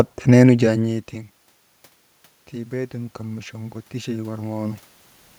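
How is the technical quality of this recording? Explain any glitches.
The recording has two technical faults: a steady ticking through nearly the whole speech clip, and a gradual gain swell in its second half.

Clock slip clicks run from 0.14 s to 5.39 s, roughly every 70 ms, around seventy in all. One sample is dropped or repeated each time, likely because two unsynchronised clocks differ by about 300 ppm. On a spectrogram they show as evenly spaced thin vertical lines.

Automatic gain rising occurs from 2.52 s to 4.84 s. After the input fell about 20 dB, the gain control raised its level about 5 dB. The waveform envelope and the room noise floor swell together.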